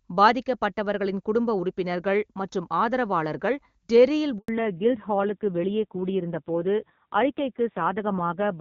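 At 4.38 s, right after "உறுப்பினர்கள் மற்றும் ஆதரவாளர்கள் டெர்ரியில்", a handover gap cuts the speech out for 100 ms, until 4.48 s. No speech frames arrived while the call switched networks, so the sound fades within a few tens of milliseconds and whatever was said in that stretch is simply gone. On a waveform it shows as a short flat line. On a spectrogram it is a clean vertical blank band across all frequencies.

From 4.48 s to the end, the call is in fallback to narrowband. Before the switch the audio is full HD Voice, consistent with AMR-WB near its top rate, with energy reaching up towards 7 kHz. After the switch nothing remains above 4 kHz, so the speech turns muffled and boxy, and a coarse, rough texture points to a low-rate AMR-NB mode around 5.9 kbit/s. On a spectrogram the upper band is abruptly sliced off at a flat 4 kHz ceiling.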